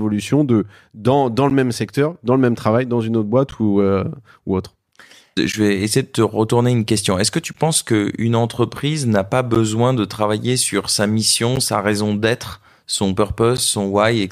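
At 1.50, 3.51, 5.52, 7.53, 9.55, 11.56 and 13.57 s, a gap between chunks interrupts the speech. At each join between 2-second chunks, 12 ms of silence is inserted and heard as a brief, hard-edged dropout. The waveform shows short stretches of near silence, and the spectrogram shows thin, evenly spaced blank vertical stripes.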